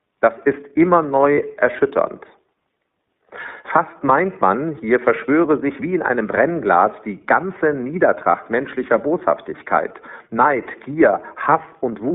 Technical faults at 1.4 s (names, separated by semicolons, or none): iLBC codec; lost iLBC frames